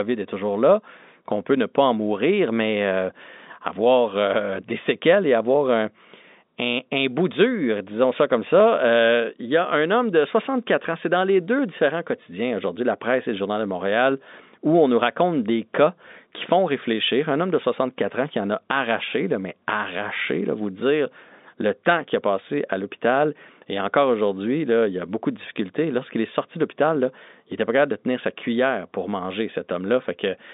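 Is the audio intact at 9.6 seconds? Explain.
Yes, the audio is intact at 9.6 seconds, with no fault there, only the steady narrow band of G.711 telephone coding, which carries nothing above about 3.8 kHz.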